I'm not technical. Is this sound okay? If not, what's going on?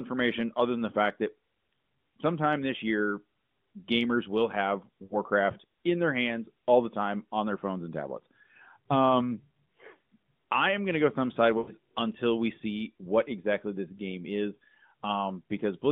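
No. There are lost AMR speech frames at 5.04 to 5.15 s, after "gamers will have", and at 11.58 to 11.72 s, just before "until we see what". The phone signal briefly dropped pieces of speech, so the decoder filled each gap, about 60 ms and 100 ms, by stretching the last sound and letting it fade.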